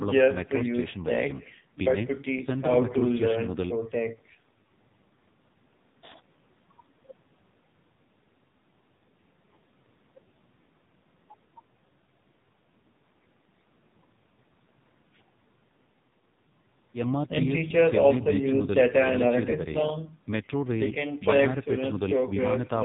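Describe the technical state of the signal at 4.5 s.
At 4.5 s you're hearing AMR narrowband mobile codec damage, present across the whole clip: nothing above 4 kHz, and a heavily buzzy, synthetic speech quality that points to a very low bitrate around 6 kbps.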